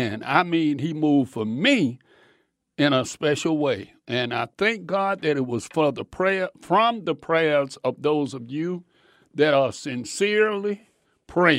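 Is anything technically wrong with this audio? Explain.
No, nothing is technically wrong with this audio.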